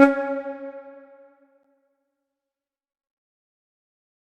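A gap between stream segments appears at 1.63 s. The timestamps of two adjacent segments, which run about 2.0 s long, fail to meet, leaving roughly 10.5 ms unaccounted for, and the player fills that space with digital silence. The result is a brief, hard-edged dropout: the sound cuts off abruptly and resumes just as sharply, like a tiny tick or stutter. Nothing is lost from the audio itself; it is simply pushed later by the inserted hole.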